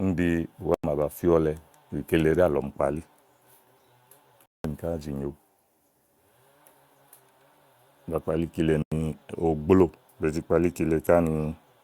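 Speech cut by abrupt holes at 0.74–0.84 s, 4.46–4.64 s and 8.82–8.92 s: blocks of digital silence. The buffer likely wasn't filled in time. The 93 ms gaps fit 4096-sample blocks, the 186 ms gap twice that.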